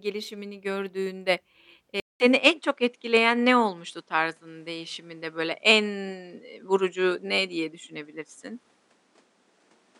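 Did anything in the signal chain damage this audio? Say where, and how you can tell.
Yes. At 2.0 s the speech cuts out for about 200 ms. When it returns, it stays changed to the end of the clip. Nothing remains above 10.7 kHz, so the top end sounds duller. The level shifts by about 5 dB. A new noise floor sits roughly 45 dB below the speech. This is likely an input switched to a poorer device at the driver stage. The system dropped the stream briefly and reopened capture on narrower hardware with its own noise and gain.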